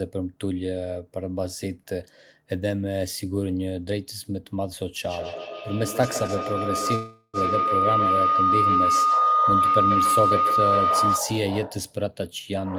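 A speech recording carries four call faults. From 5.07 to 11.33 s a feedback howl builds up. It rises to about 5 dB above the speech. It settles near 1.5 kHz and pulses roughly every 150 ms. Two devices in one room share the call. Sound leaves a loudspeaker, reaches the microphone and returns louder each trip. The loop favours that frequency, so the tone grows rather than dying away. Inside the howl, from 6.01 to 6.06 s, there is a short stall from a late packet. One packet missed its slot and the jitter buffer ran dry. The receiver held the last sound for 16 ms until the packet came. Nothing was lost, but the sound hangs briefly with a faint buzz or dip. It adds 16 ms of delay. From 6.95 to 7.37 s comes a call audio freeze. The sound stops moving forward and the last moment is stretched into a fading buzz or hiss. It ends in 60 ms of silence. This 384 ms gap is likely the jitter buffer emptying while packets were held up in transit. 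The audio then resumes where it stopped, so nothing is missing. The delay grows by 384 ms. From 11.98 to 12.67 s a jitter buffer speed-up follows. The buffer had too much audio queued. The receiver cut many tiny pitch-period slices, around 50 ms in total. Speech runs at 106% speed with unchanged pitch. It sounds slightly hurried.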